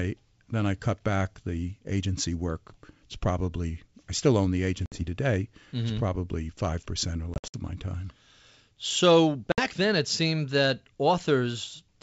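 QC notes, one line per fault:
4.86–5.03 s, packet loss on an ADPCM call: after "I still own the", a 60 ms hard-edged silent gap shows as a blank vertical band in the spectrogram. The decoder's predictor and step size then lag the sender's, so speech resumes slightly distorted.
7.34–7.57 s, packet loss on an ADPCM call: before "of my time", 140 ms drops out in several gaps over 200 ms, the longest 60 ms, appearing as flat waveform stretches. Mistracking after each gap causes slight distortion that settles quickly.
9.52–9.61 s, packet loss on an ADPCM call: just before "then it seemed that", a clean 60 ms cut to silence appears as a sharp-edged blank band. The speech returns slightly distorted as the decoder resynchronises.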